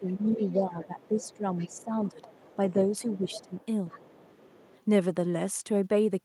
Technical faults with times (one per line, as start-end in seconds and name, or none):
0.00-3.52 speech suppressed in double talk
0.16-4.83 other side's voice leaking through